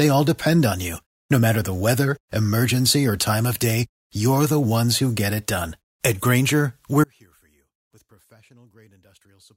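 At 7.04 s the speech drops out abruptly and never recovers, running to the end. This is an audio dropout to a faint residue: only a faint sound remains, roughly 35 dB below the signal. The likely cause is a broken feed upstream while the downstream path stayed live.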